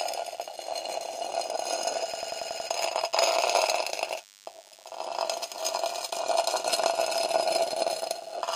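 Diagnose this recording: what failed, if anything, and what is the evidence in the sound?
A thin, steady 100 Hz buzz with many harmonics runs throughout, about 25 dB below the signal. This is DECT cordless phone buzz: the analogue wiring is rectifying radio bursts arriving every 10 ms.

From 2.14 to 2.69 s, a 93 ms fragment repeats six times at 10.8 Hz as a machine-gun stutter. This is a system hang loop: the driver froze while the hardware kept cycling its ring buffer, which fits a 4096-sample buffer. About half a second of audio is lost.

At 6.51 s the audio jumps ahead by about 20 ms. Compressed frames were skipped in the codec stage. One 23.2 ms frame was dropped.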